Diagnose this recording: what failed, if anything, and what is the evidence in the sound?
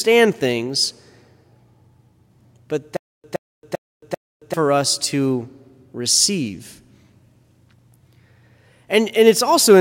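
There's a stutter with silent gaps from 2.97 to 4.54 s: a 120 ms fragment of the speech repeats four times, each followed by about 272 ms of dead digital silence, a steady 392 ms cycle. That's most likely a playback or stream stall replaying its last buffer, so that stretch of audio is simply gone.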